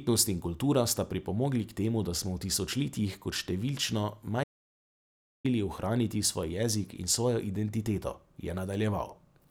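An audio dropout to silence runs from 4.44 s to 5.45 s in this speech recording, removing about a second of sound. The speech stops abruptly mid-flow and resumes just as suddenly, and the gap between is silent with no room tone left. That points to the input signal vanishing while the recorder kept writing silence, likely from a disconnected device, a broken link or a momentary mute.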